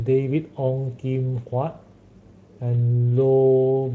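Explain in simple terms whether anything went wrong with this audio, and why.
Nothing went wrong with this speech recording: it passes through a Speex voice codec, the kind used in older internet calls and game chat, and the slight mark that leaves on the sound is how that codec normally works, not a fault.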